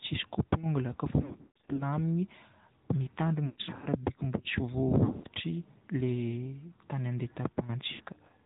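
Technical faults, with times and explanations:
Throughout: AMR narrowband mobile codec. The sound is confined below 4 kHz and carries a plainly audible buzzy, synthetic edge. This fits AMR-NB at about 10.2 kbps, where each short frame is rebuilt from a vocal-tract model driven by sparse pulses. A simple low-pass filter would only dull the top end. Here the harmonics themselves sound artificial, and anything that doesn't fit the speech model comes out smeared and warbling.
1.22–1.83 s, 3.46–3.87 s, 5.04–5.27 s, 7.92–8.03 s: lost AMR speech frames. In each stretch the sound briefly freezes into a stretched, wavering tone that sinks away, then returns thin or rough. The decoder is repeating its last good pitch and filter settings at falling gain. Losses are scattered across 560, 360 and 200 ms in the first three, with the longest unbroken runs of 140, 120 and 80 ms, and 80 ms at the end. A plain dropout would cut straight to silence, but this concealment smears and decays instead.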